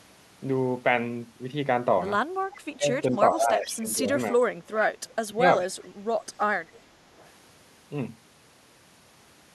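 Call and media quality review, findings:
Echo leak: faint delayed copy of the speech trailing by 420 ms at 2.53–2.58, 3.36–3.71, 4.8–5.13, 6.74–6.78 and 7.17–7.29 s. It's mostly well down, though the 4.8 s one is fairly loud. Likely the far end's echo canceller on a speakerphone letting residual pickup back through.

Speech suppressed in double talk: speech ducks in pieces across 2.78–4.4 s, roughly a second in total, dipping around 15 dB, then a sharper dip of about 25 dB at 5.26–5.43 s. Likely the echo canceller mistaking near-end speech for echo while both ends talk and attenuating everything.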